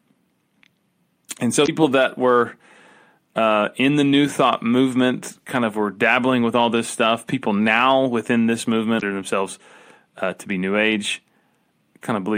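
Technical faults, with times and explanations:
1.63 to 1.69 s and 8.98 to 9.03 s: damaged data in a compressed stream. Each time the speech is broken by a short glitch lasting under a tenth of a second. Corrupted bytes made the decoder misread those frames and lose sync until it found a clean frame header.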